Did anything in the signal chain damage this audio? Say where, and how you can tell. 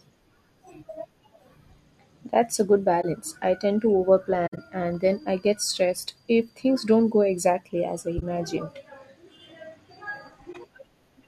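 Yes, at the codec stage: corrupt frame concealed. Short soft-edged holes and smeared dips appear in the speech at 3.02–3.04 s, 4.46–4.58 s, 8.17–8.23 s and 10.52–10.57 s, each roughly two to five AAC frames long. The decoder detected damaged bits and muted or patched those frames itself. Unlike raw bit errors, there's no squeak or burst, and unlike a dropout or lost packet, the timing stays intact with nothing skipped or shifted.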